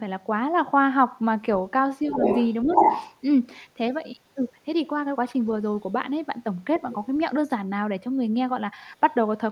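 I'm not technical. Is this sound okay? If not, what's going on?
No. When both sides talked at once, the echo canceller likely mistook the talker for echo: speech suppressed in double talk, with a slight dip at 2.03–2.23 s and a deeper one at 2.64–2.76 s.

The echo canceller likely missed part of the loudspeaker sound, so you hear the other side's voice leaking through. It is as loud as the talker at 2.13–2.54 s, louder at 2.71–3.15 s, faint at 6.76–7.06 s, and barely audible at 7.44–7.5 s.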